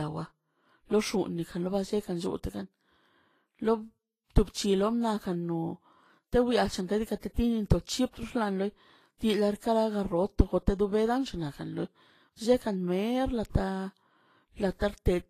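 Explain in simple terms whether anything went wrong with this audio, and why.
Vorbis compression, throughout the clip: the speech has a grainy, hissy edge, and nothing is present above about 14.2 kHz. This is likely lossy Vorbis encoding at a low setting. To save space, the encoder removed the highest frequencies and stored the remaining treble detail only roughly. That fine detail ends up replaced by noise of similar loudness, so the brightest parts of the sound come across as rough and sandy rather than clean.

Pre-echo, from 7.19 to 7.23 s: just before a sharp sound at that point, a short hiss rises for about 35 ms, and the attack itself sounds soft. The encoder works on short chunks of audio and spreads its errors evenly across each chunk. When a sudden loud moment lands near the end of a chunk, the noise meant for that loud part also spills into the quiet instant before it, where it can be heard.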